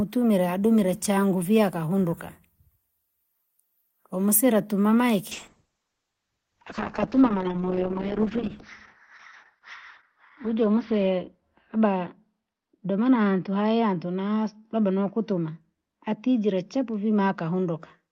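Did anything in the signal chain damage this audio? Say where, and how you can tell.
Yes. A call bitrate drop hits the codec stage from 5.32 s, just after "umsire atuma", to the end. The encoder falls from 32 to 7 kbps, so the sound turns rough and muffled. A spectrogram shows the top band collapsing from 20 kHz to 6 kHz.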